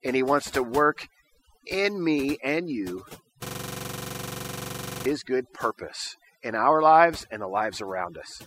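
Across the whole recording, overdone noise removal leaves the background almost silent but dotted with twinkling specks. The reduction was set too hard, so individual frequency bands near the estimated noise floor are pushed right down or switched off, taking quieter parts of the voice with them. Unlike low-bitrate codec artefacts, the damage follows the noise level: it is worst in the quiet background and the soft edges of the speech.

From 3.46 s to 5.06 s, between "in me and you" and "good purpose in our", a system hang loop takes over. The system froze while the audio hardware kept replaying the same 42.67 ms piece of its ring buffer, which fits a 2048-sample buffer, dozens of times in a row. At 23.4 repeats per second it sounds like a rattling buzz. It differs from ordinary dropouts or stutter because every repeat is identical and evenly spaced.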